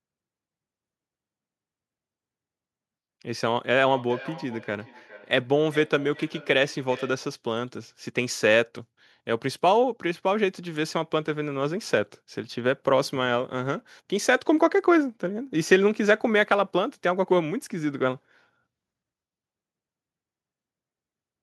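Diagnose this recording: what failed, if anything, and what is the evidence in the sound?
Feedback echo between two devices, from 3.84 to 7.27 s, is a call-processing failure. The speech returns at a steady interval of roughly 0.4 s, peaking at about 19 dB below the direct speech. Two devices in the same room are on the call, and one is playing out what the other's microphone sent. That microphone hears it again. Each device's echo canceller only removes its own playback, so this loop passes through uncancelled.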